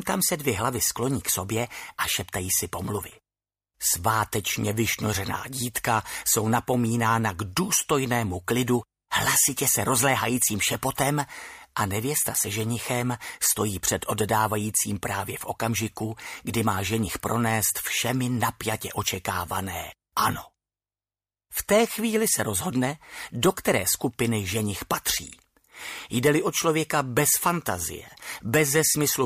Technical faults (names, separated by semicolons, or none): none